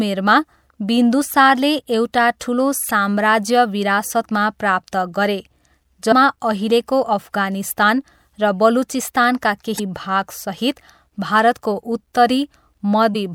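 A speech clip with damaged data in a compressed stream at 2.88–2.91 s, 6.11 s, 9.76–9.80 s and 13.12–13.16 s: corrupted bytes make the decoder misread frames and hunt for sync, giving brief chirps, squawks, clicks or short holes.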